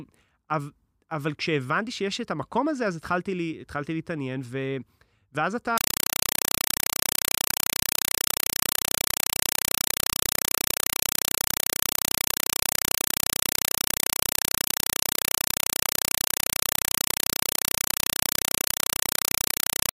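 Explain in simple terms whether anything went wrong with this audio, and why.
From 5.78 s onward, a compressed stream was played as audio: undecoded data, fitting Dolby Digital, replaced the speech with loud static chattering 31 times a second.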